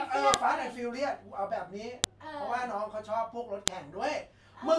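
At 0.34 s, a sharp, loud click cuts through the speech. It returns at 2.04 s and again at 3.68 s. Each one is a file header played as audio. Separate WAV segments were joined without stripping their headers. Those few dozen bytes of file metadata are read as sample values. They form a brief, spiky burst at each join. The snap lands regardless of what the speech is doing at that moment.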